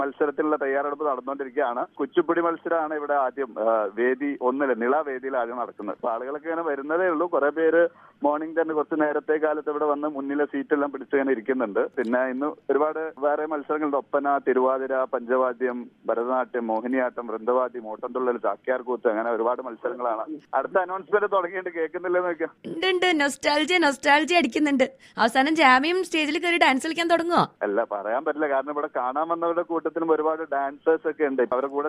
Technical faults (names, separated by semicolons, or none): none